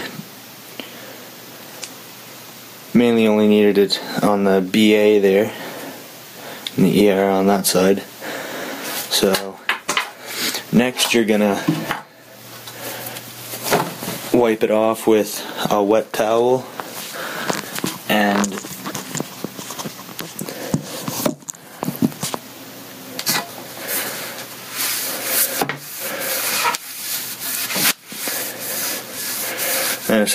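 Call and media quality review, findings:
Gain pumping, throughout. Level ducks on each loud sound and recovers after, swinging around 20 dB; dynamics squashed. Waveform: flattened envelope, uniform amplitude. Spectrogram: energy bands rising and dipping together. Likely input gain set too high, fast limiter/compressor pulling it down.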